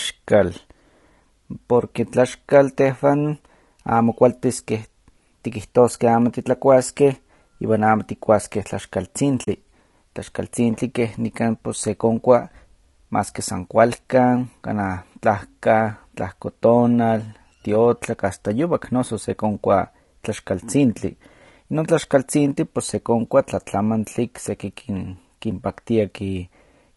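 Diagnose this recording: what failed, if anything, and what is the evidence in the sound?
Codec stage: the speech sounds rough and grainy throughout, with noise filling the gaps between harmonics. This is likely low-delay AAC compression at around 32 kbps, not broadband hiss.

Network and codec stage: AAC frame loss with muting leaves a 40 ms soft-faded hole from 9.43 to 9.48 s, consistent with two lost frames.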